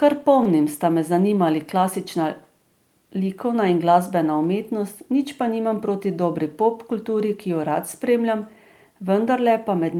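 Speech, with one short stall from a late packet at 0.43 to 0.47 s: the jitter buffer ran dry, so the receiver stretched the last sound by about 21 ms, then resumed where it left off. Nothing's lost, but that moment hangs slightly and everything after sits 21 ms later.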